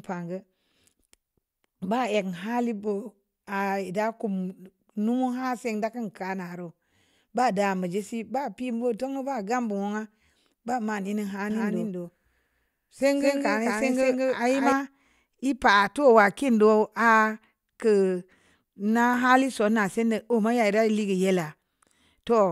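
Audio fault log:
11.50–14.72 s, doubled audio track: a full-band copy of the speech trails about 200 ms behind at roughly equal level, likely from a slower second capture path. The waveform and spectrogram show each syllable repeated at a fixed offset, starting and stopping abruptly without decay.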